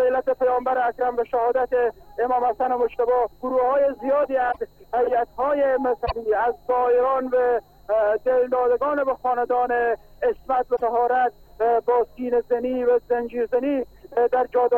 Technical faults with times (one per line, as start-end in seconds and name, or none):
4.51-4.58 broken MP3 bit reservoir
6.05-6.12 broken MP3 bit reservoir
10.75-10.81 broken MP3 bit reservoir